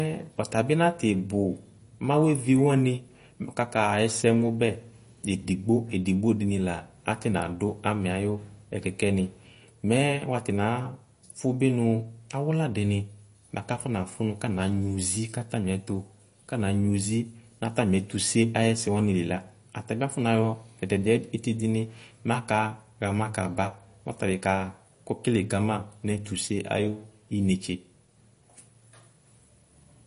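MP3 compression damage runs through the whole recording: the treble stops dead above 10.6 kHz, and the speech carries a watery, swirling texture with chirpy s sounds. That points to a likely low-bitrate MP3 encode, around 40 kbps, where the encoder drops weak frequency lines frame by frame.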